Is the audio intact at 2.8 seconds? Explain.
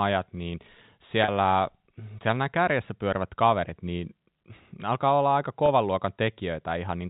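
Yes, the speech at 2.8 seconds is intact, with no dropout, click or distortion at that moment beyond the telephone band limit of the G.711 coding, which stops everything above 4 kHz.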